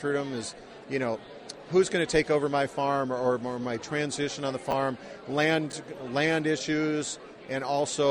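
Chunks out of order at 4.71–4.73 s and 5.70–5.73 s: 10 ms slices land one, then two, places late, so the sound briefly jumbles.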